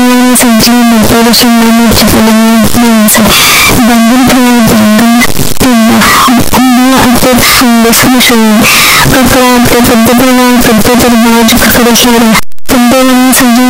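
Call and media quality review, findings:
Float read as integer, whole clip: speech near-square at a near-fixed high level, harsh, noise floor as loud as voice, pitch still followable. Likely 32-bit float samples read as 32-bit integer, sign/exponent bits setting level. Unlike clipping, quiet passages are equally loud.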